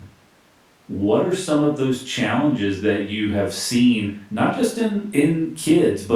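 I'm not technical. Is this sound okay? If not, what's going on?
Yes, nothing stood out as a problem when listening to this recording.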